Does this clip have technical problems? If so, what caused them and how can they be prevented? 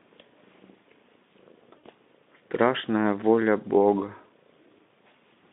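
Yes. VoIP packet loss concealed by the speech codec occurs from 1.77 to 1.84 s, where about 60 ms of the stream goes missing, consistent with three 20 ms frames. The Speex decoder, heard elsewhere as a narrowband line with only light coding roughness, fills the gap by repeating its last pitch and vocal-tract filter at falling gain. The speech smears into a brief buzzy tone or coloured noise that fades, and because each decoded frame builds on the previous one, the voice stays weak or distorted just after the gap. To prevent it, use a jitter buffer sized for the network, forward error correction or redundant packets, and prioritise voice traffic with QoS.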